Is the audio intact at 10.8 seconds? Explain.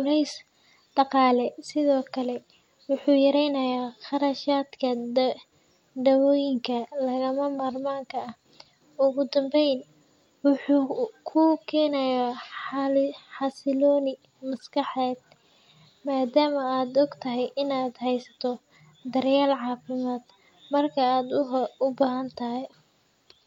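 Yes, at 10.8 seconds the speech carries through intact, with no dropout, click, distortion or other fault audible at that point.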